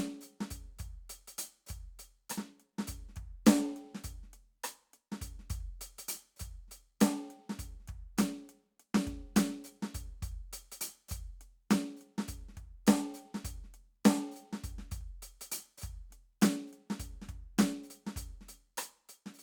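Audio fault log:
No technical fault can be heard anywhere in the music; the signal holds steady, with nothing in its level, continuity or timing calling for a log entry.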